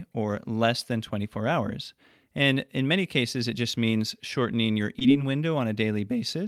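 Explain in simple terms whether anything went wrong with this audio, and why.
At 4.99 to 5.02 s there is a short concealed packet loss. About 20 ms of the call reached the decoder too late, so the receiver patched the gap by extending the sound just before it, then blended back into the real audio. It comes across as a brief smear or wobble.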